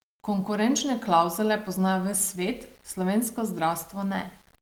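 Low bit depth without dither runs throughout this speech clip. Quiet passages turn gritty and grainy, with distortion that moves with the voice rather than a steady hiss, sitting roughly 35 dB below the signal. This is likely plain rounding to about 8 bits, so the error tracks the waveform.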